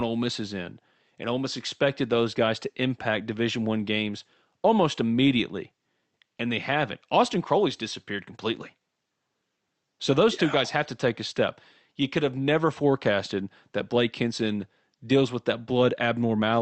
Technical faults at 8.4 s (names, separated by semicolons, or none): none